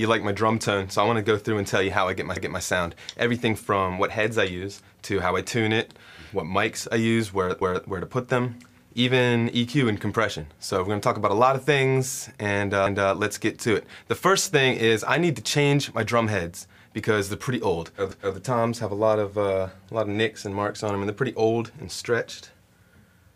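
At 7.61 to 7.87 s, overlapping chunks repeat a 250 ms piece of audio at a join between 5-second chunks, heard as a stutter and visible as a duplicated spectrogram segment.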